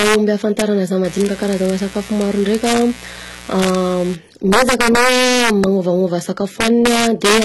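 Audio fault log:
Throughout: HE-AAC compression, likely heavy and at a low bitrate near 16 kbps. Nothing above 11.8 kHz, and the replicated treble makes sibilants gritty and metallic.
0.00–0.15, 0.59–0.61, 1.21–1.70, 2.21–2.81, 3.60–3.75, 4.52–5.64, 6.61–7.44 s: integer overflow. Peaks exceeding full scale by about 1 to 4 dB wrap to the opposite sign, producing violent cracks harsher than clipping.
1.04–4.15 s: mains buzz. A raspy 60 Hz buzz with harmonics reaching into the kilohertz range sits about 20 dB below the speech.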